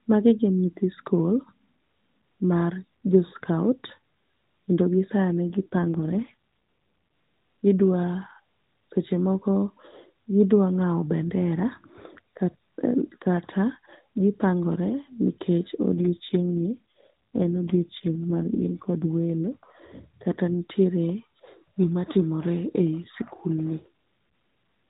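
Speech over a narrowband mobile link shows two AMR rate drops, at 5.50–6.33 s and 15.92–19.11 s. The voice turns rougher and more synthetic, which fits a fall from 12.2 to 4.75 kbps. Unlike a dropout or band-limiting fault, there is no gap and the bandwidth doesn't change.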